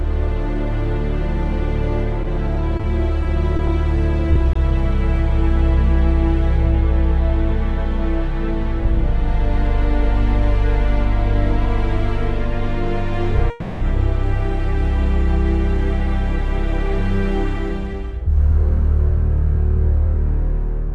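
From 2.23 to 3.61 s there are scattered short gaps: about five small holes, none longer than roughly 20 ms, patched by carrying the preceding sound forward. Together they make up only a small share of that stretch. Each registers as a tick or smear rather than a dropout. On a spectrogram they show as thin vertical seams where harmonics briefly flatten or blur. The waveform keeps its envelope, with tiny discontinuities at each seam.

At 4.33 and 4.53 s there is short concealed packet loss. Each time, 20 ms of audio was missing and was replaced by a continuation of the last sound before the real signal resumed. The result is a brief wobble or blur, and a clipped consonant-like transient could disappear. A spectrogram shows two narrow bands with smoothed, repeated spectral detail. The waveform shows a short, overly periodic patch.

From 13.50 to 13.83 s comes a call audio freeze, likely caused by delayed packets draining the jitter buffer. 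The last sound is stretched into a 310 ms buzz or hiss that fades, and then the audio resumes exactly where it stopped. Nothing is lost, but a pause has been inserted and the delay grows by 310 ms. On a spectrogram this appears as a horizontally smeared block of frozen, decaying spectrum. The waveform shows a repeating, shrinking pattern.

From 16.0 to 20.88 s a jitter buffer speed-up trims excess buffered delay. Short pitch-period-length pieces are cut out repeatedly, about 100 ms in total, so playback runs about 2% fast at an unchanged pitch. Harmonic spacing on a spectrogram stays constant while events arrive marginally sooner. The waveform carries small splice points where cycles were dropped.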